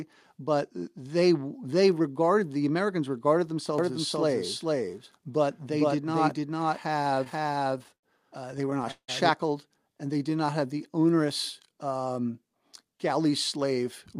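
From 3.78 to 9.29 s a doubled audio track plays: a second, equally loud, dry copy trails about half a second behind, starting and stopping abruptly, likely from an edit holding two copies out of step. Repeated stalls (stutter) occur from 7.15 to 8.05 s and 8.52 to 9.10 s. Late packets emptied the buffer, and continued sound filled gaps of up to 80 ms and then 169 ms, so the audio drags and stutters. A jitter buffer slow-down from 9.99 to 11.07 s repeats pitch periods, adding 126 ms and running at 89% speed with stretched sounds. A jitter buffer speed-up from 12.92 to 14.19 s trims roughly 70 ms, running at 106% speed at unchanged pitch and sounding hurried.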